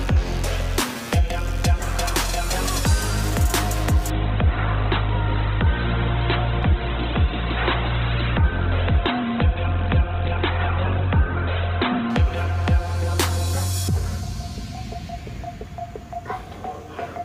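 At 4.10 s the treble suddenly vanishes, with nothing above 4.2 kHz, and codec artefacts rise. The adaptive stream has switched to a lower bitrate after the connection slowed. The thin sound fits a 12 kbit/s encoding. Full quality returns at 12.10 s, with no gap.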